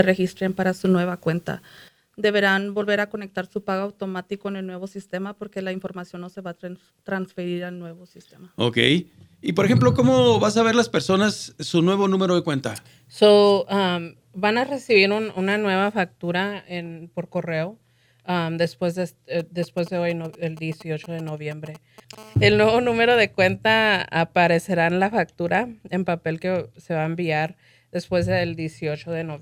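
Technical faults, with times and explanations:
19.39 to 22.15 s, GSM signalling bursts: a galloping dit-dit-dit of brief raspy buzzes at 217 Hz, roughly 20 dB under the sound. A nearby 2G phone is sending short groups of signalling bursts, and the audio circuit rectifies each radio pulse into audible clicks.
22.18 to 23.28 s, GSM phone buzz: a hard, harmonic-rich 217 Hz buzz, steady and about 30 dB below the sound, unrelated to the material. The phone has moved into a call, transmitting in bursts 217 times a second, and the circuitry rectifies those bursts into this rasp.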